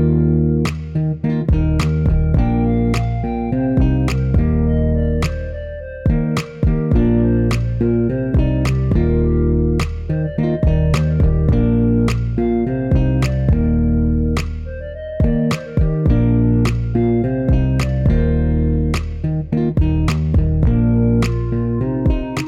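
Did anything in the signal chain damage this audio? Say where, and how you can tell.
No, there is no audible sign of damage from any stage of the signal chain in this audio.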